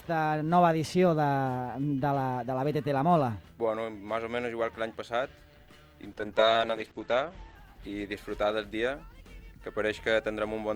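From 6.15 s to 9.17 s a call bitrate drop makes the sound rough, watery and muffled. The coarse coding points to a fall from 48 to 10 kbps. A spectrogram shows the band narrowing from 20 kHz to 8 kHz, worst for 1.18 s.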